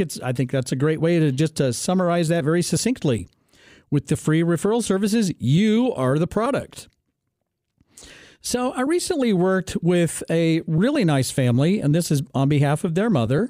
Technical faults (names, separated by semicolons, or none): block of digital silence